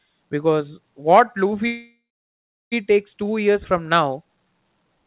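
At 1.66 s the speech halts in a call audio freeze lasting until about 2.74 s. The last sound is stretched into a brief fading buzz, then about 0.71 s of silence. The likely cause is packets arriving late so the jitter buffer ran dry. When the audio resumes, it picks up exactly where it stopped. Nothing is lost, but everything after is pushed back by about 1.06 s. Throughout, the call path cuts everything above 4 kHz, which fits a narrowband codec such as G.711.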